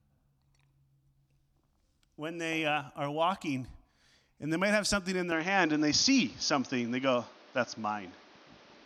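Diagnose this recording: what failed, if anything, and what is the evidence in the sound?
From 5.32 s, right after "might have something in", the speech turns duller through to the end: nothing remains above 6.6 kHz, the level shifts modestly, and a new, faint background noise appears, with no gap at the change. The fault sits at the driver and device stage and is likely an input switched to a poorer device, where the system changes microphones mid-recording and the replacement brings a narrower band, its own gain and its own noise floor.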